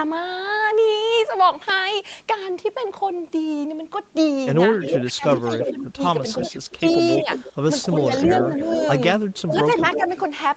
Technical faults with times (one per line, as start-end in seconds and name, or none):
4.81-10.24 echo leak
5.04-7.28 speech suppressed in double talk
8.00-8.67 speech suppressed in double talk
9.47-10.09 speech suppressed in double talk